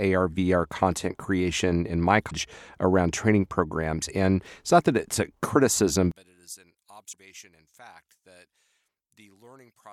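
At 2.27 to 2.32 s, just after "content creation in my", damaged data in the compressed stream makes the decoder lose frame sync, giving a brief glitch before "around training programs". From 6.11 s to the end, just after "that it's a criticism", the speech drops by about 28 dB into a faint residue, likely because one channel is inverted and the centred voice cancels when the channels are summed to mono. Inside that stretch, another patch of damaged stream data at 7.09 to 7.14 s produces a second short glitch.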